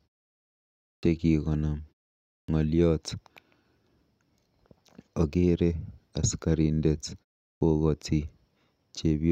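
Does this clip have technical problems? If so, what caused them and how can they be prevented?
Yes. At 0.99, 2.44 and 7.57 s, speech jumps abruptly out of silence with its first sounds missing, about 39 to 44 ms lost each time. This is a clipped start after a pause: during the preceding silences of 0.4 to 1 s the output device sleeps and needs time to wake again. Keeping the output device active through silence, by disabling its power saving or feeding it a steady low-level signal, prevents this.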